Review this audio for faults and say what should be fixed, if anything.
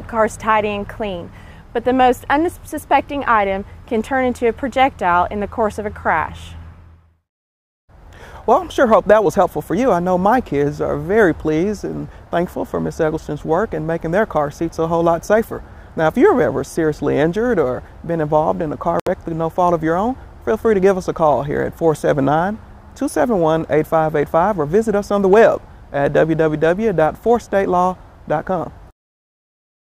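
Packets likely reached the headphones too late and were discarded. This Bluetooth dropout cuts the sound to silence from 19.00 to 19.08 s, and playback resumes further along.

Keep the headphones close to the source with a clear line of sight and away from Wi-Fi interference.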